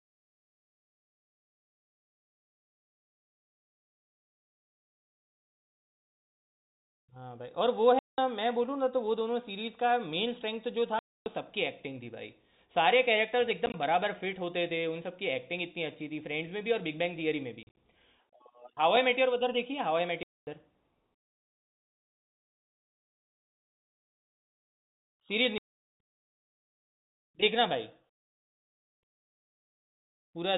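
Packet loss filled with silence chops the speech at 7.99, 10.99, 13.66, 17.63, 20.23 and 25.58 s. Lost stretches became hard-edged dropouts from 40 to 420 ms, scattered at 13.66 and 17.63 s, in steps that fit 10 ms packets over the telephone-band G.711 line.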